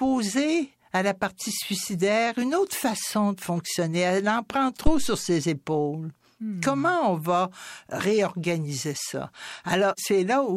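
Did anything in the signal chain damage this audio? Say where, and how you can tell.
Yes, there's a phantom power thump at the analogue input stage, at 4.87 s, right after "en prend". It's a deep, low thud peaking at about -7 dBFS that dies away over roughly 80 ms, with the disturbance running to about 5.23 s. That's the signature of phantom power being switched on a live input. The sudden DC step goes through the coupling capacitors and comes out as one low-frequency pulse.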